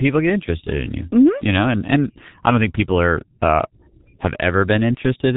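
Speech coded throughout with the G.723.1 codec, and the damage is heavy. Nothing is present above about 3.8 kHz, so the top end is cut off and the sound is muffled. The voice has a hoarse, rough texture because the coder's model of the voice is refreshed only once per 30 ms frame. Consonants are smeared. The overall coarseness fits the codec's rate of about 6.3 kbit/s.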